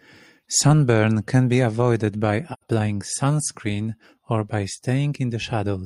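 At 2.53 to 2.63 s, AAC frame loss with muting leaves a soft-edged gap of about 85 ms in the speech, heard as a brief dropout. The gap matches two lost frames. The spectrogram shows a blank vertical band with tapered edges, and the waveform fades smoothly to silence and back.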